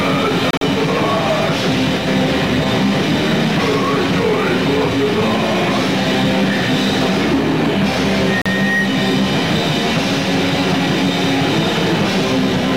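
Two short holes cut into the audio, most likely Bluetooth dropouts: at 0.51–0.62 s several gaps totalling 67 ms are scattered, the longest 40 ms, and at 8.42 s a single 40 ms gap. Unlike an edit, the sound resumes where it would have been had it kept playing.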